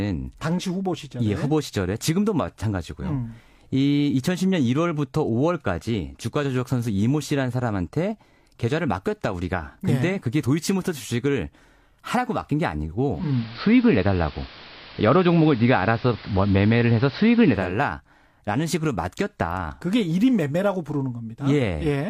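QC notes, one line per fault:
13.10–17.78 s, digital radio blending to analogue: the receiver lost its digital stream and cross-faded over 288 ms to the station's AM broadcast, so treble drops, level shifts by about 4 dB, and hiss rises to roughly 25 dB below the speech.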